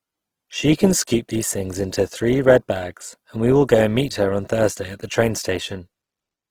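From start to end, the speech sounds rough and grainy, with a noisy, hissy texture over tones. It swirls less than MP3 would. This is likely Opus compression in its music mode, filling starved bands with folded or noise content. The damage fits about 16 kbps.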